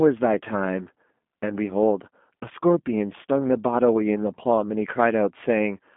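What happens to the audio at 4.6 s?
At 4.6 s the speech carries the G.729 codec coloration that runs through the whole clip. The voice is rebuilt from a vocal tract filter, a pitch predictor and a few pulses per frame, which fits an 8 kbit/s G.729A stream, so it sounds slightly rough and synthetic. On a spectrogram, energy sits between 200 Hz and 3.5 kHz with nothing above, and the harmonics look smeared rather than crisp.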